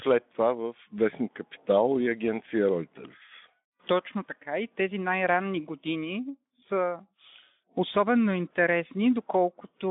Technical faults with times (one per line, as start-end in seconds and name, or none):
none